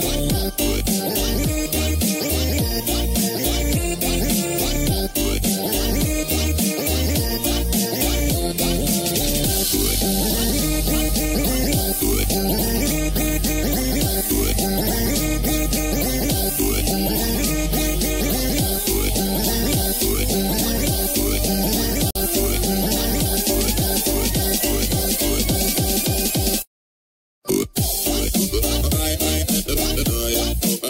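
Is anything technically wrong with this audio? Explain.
Yes. At 22.11 s the sound drops into a silent gap of about 49 ms, ending at 22.15 s, then resumes exactly where it left off. This is a gap at a join of encoded pieces: two separately encoded segments were butted together without removing the encoder's start-up delay and final-frame padding, so that dead time survives. On a waveform it shows as a flat stretch with softened edges. A spectrogram shows a vertical empty band across all frequencies, its borders smeared by the codec.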